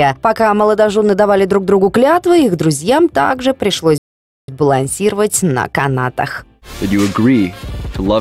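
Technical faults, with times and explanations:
3.98 to 4.48 s, playback stall. The sound cuts off abruptly in mid-flow. The output then stays silent for about 0.50 s before the audio returns. The gap does not sound like a pause in the material. It is a hard stop with nothing at all underneath. The likely cause is a player that ran out of buffered data, or whose audio thread was blocked. Nothing reached the output until it recovered.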